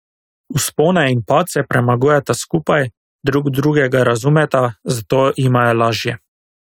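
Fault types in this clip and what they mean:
No faults can be heard.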